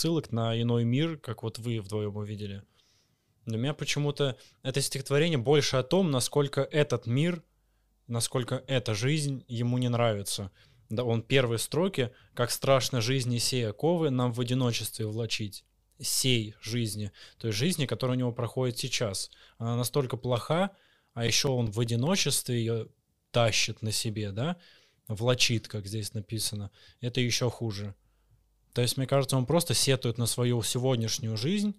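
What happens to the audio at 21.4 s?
A run of regular clicks, eight ticks from 20.68 to 22.07 s, each only a few milliseconds long: CD scratch ticks, where a scratch defeats error correction once per disc revolution.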